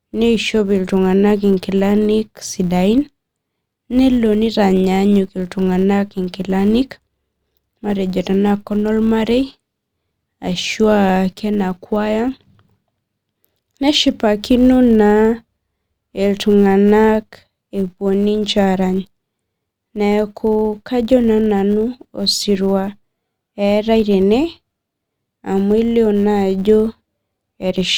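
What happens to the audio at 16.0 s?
At 16.0 s the speech carries a steady buzz at 100 Hz, as it does through the whole clip. This is a filter restarted on every block. The filter drops its state every 10 ms. Each block starts from silence with a small transient, so the buzz rises and falls with the speech level.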